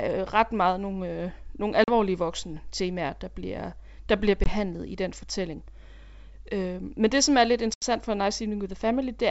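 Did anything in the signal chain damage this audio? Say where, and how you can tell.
Yes, at the network stage. This is packet loss on an ADPCM call, carried over the G.722 wideband path. The speech cuts to hard-edged silence at 1.84–1.91 s (40 ms missing, roughly two packets), 4.44–4.51 s (20 ms, about one) and 7.74–7.83 s (80 ms, around four). A waveform shows flat gaps with abrupt edges. A spectrogram shows blank full-band columns. The decoder's adaptive predictor and step size fall out of step with the sender's, so the sound returns briefly, slightly distorted, then settles within tens of milliseconds.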